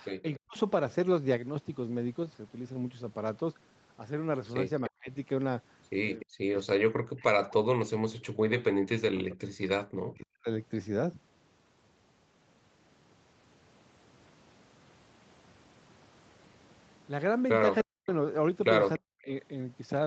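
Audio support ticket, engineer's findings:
Speech suppressed in double talk: level drops by roughly 40 dB, up to near-silence, at 0.22–0.57, 4.89–5.1, 6.24–9.69 (longest, about 3 s), 9.92–10.49, 17.83–18.1 and 18.99–19.29 s. Likely the echo canceller mistaking overlapping far-end audio for echo and ducking the near talker along with it.

Echo leak: faint delayed copy of the sound at 6.2–6.25 s (about 20 dB under the speech) and 7.19–7.24 s (about 30 dB under), both trailing by 292 ms. Likely loudspeaker pickup the canceller didn't fully remove, so short scraps got sent back.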